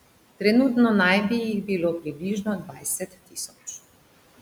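From 2.00 to 2.22 s, speech is cut by the noise suppressor, with parts dipping by about 10 dB. From 2.62 to 3.51 s it happens again, deeper, by about 17 dB, for roughly half a second. The suppressor mistook quiet speech for the room noise, which sits about 21 dB below the speech, and turned it down, so sounds come out swallowed and faint.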